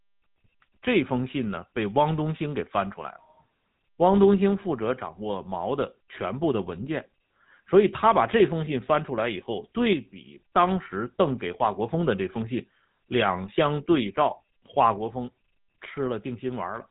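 From start to finish the speech carries GSM full-rate codec damage, plainly audible as a buzzy, gravelly roughness, which fits the 13 kbps GSM full-rate codec. A spectrogram shows a hard ceiling at 3.8 kHz, with coarse, smeared harmonics below it.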